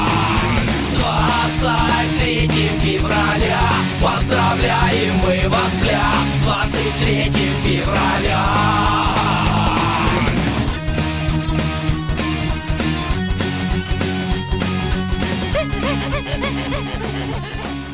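No technical faults are audible.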